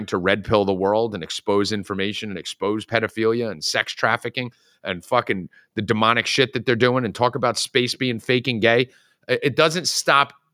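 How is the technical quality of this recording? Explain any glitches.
The technical quality of the recording is sound, with no glitches to explain.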